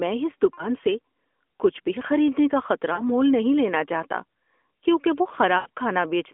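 Brief smeared, fading dips interrupt the speech at 0.54 to 0.68 s and 2.94 to 3.03 s. A longer, more drawn-out fade comes at 5.58 to 5.69 s, and the voice returns thin for a moment after each. These are lost AMR speech frames, about 40, 40 and 80 ms of audio. The decoder filled each gap by repeating the last good pitch and vocal tract settings at falling gain. The narrowband telephone sound itself carries only light codec coloration.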